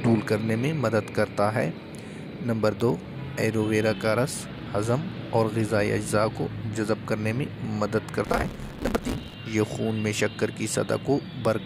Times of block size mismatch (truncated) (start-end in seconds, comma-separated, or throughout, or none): 8.24-9.35